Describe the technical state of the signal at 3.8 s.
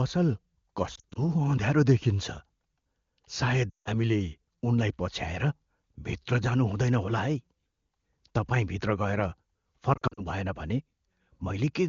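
At 3.8 s the signal sits inside a run of lost AMR speech frames spanning 3.70 to 3.88 s, about 160 ms, which fits roughly eight consecutive 20 ms frames failing their checks. The wideband decoder conceals the gap by repeating the last good pitch and vocal-tract parameters at falling gain, so the sound smears briefly and then dies toward silence. The waveform shows a sustained, shrinking envelope. The spectrogram shows frozen, stretched harmonics fading to an empty band.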